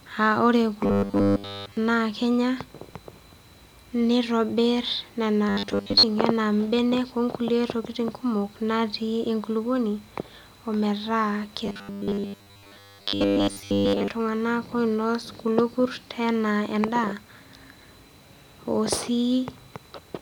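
From 0.84 to 1.77 s, between "aa ore" and "naa kenya", the speech becomes a rigid metallic buzz: robotic sound from repeated short buffers. Audio likely arrived too seldom, so a slice of about 10 ms was looped in place of the skipped audio, locking a steady 100 Hz tone onto it. Here nearly everything is repeated. The same fault returns at 5.49 to 6.03 s, after "nitobir nena", and at 11.66 to 14.08 s, where most of the sound is repeated. Unlike codec warble, the buzz rate stays fixed while the sound still loosely follows the speech.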